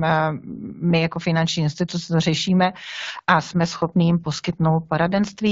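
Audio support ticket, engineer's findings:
AMR rate drop from 3.55 s to end of clip, right after "instituce to řešíme a". Weak radio link, network forces AMR-WB codec down from roughly 12.65 kbit/s, likely to 8.85 kbit/s, trading speech bits for error protection. Same bandwidth, no gap, but audibly rougher, more synthetic speech.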